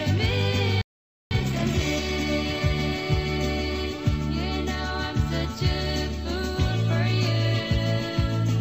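At 0.81 s the sound cuts off mid-flow and stays silent until 1.31 s, about half a second. This is a playback stall. The player most likely ran dry of buffered data or had its thread blocked. The gap is clearly audible.

From 1.31 s to 2.29 s comes a time-compressed catch-up. The player clears its backlog by dropping short slices and cross-fading across them. The audio runs about 1.5 times faster at normal pitch.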